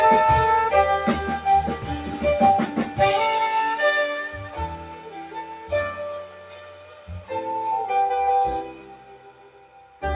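The audio has a speech-tuned noise suppressor applied to music or sounds throughout. It treats steady tones and decaying tails as noise. The gain swings by around 10 dB, so sustained passages pump and thin out while onsets mostly get through. The sound is cut by the noise suppressor in four stretches: 1.76–2.19 s, 4.29–5.71 s, 6.24–7.3 s and 8.78–10.02 s. Level drops there by about 6 to 7 dB, and held sound sinks and fades early. Nothing is heard above 4 kHz, which fits a G.711 A-law call path at 64 kbps.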